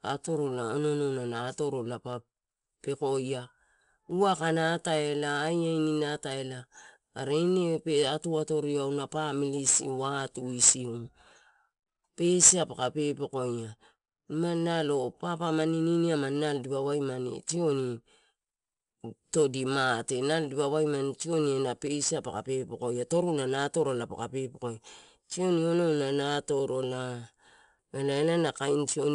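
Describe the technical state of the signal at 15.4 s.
At 15.4 s, like everywhere else in this speech clip, you're hearing 4-bit ADPCM compression. Each sample is stored as a coarse 4-bit step from a predicted value, so the coding error rides along with the level as a gritty hiss on louder passages, with roughness where sharp onsets outrun the adapting step size. It's plainly audible. Nothing sits above about 10.7 kHz, which fits a sample rate near 22 kHz and dulls the top end.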